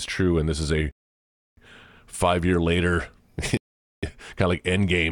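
At 0.91 s the speech stops dead and silence holds until 1.57 s, a rebuffering stall of about 0.66 s: the player exhausted its downloaded audio and waited for more. A second stall runs from 3.57 to 4.03 s, adding about 0.46 s. Each time, the speech picks up exactly where it broke off, with nothing skipped, which distinguishes a stall from packet loss or a dropout, where a piece of the sound goes missing and time is not extended.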